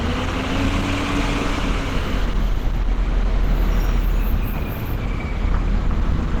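Throughout, the sound is plainly grainy and hoarse rather than swirling like MP3, likely from Opus compression at 16 kbps in hybrid mode, which fills missing bands with noise.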